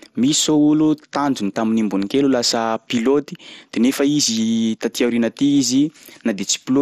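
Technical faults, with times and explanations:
Throughout, MP2 compression: the speech is dull, with nothing above 14.8 kHz and a plainly audible gurgling, granular texture, likely from MPEG Layer II coding starved of bits at a rate near 64 kbps, switching upper sub-bands off and coarsely quantising the rest.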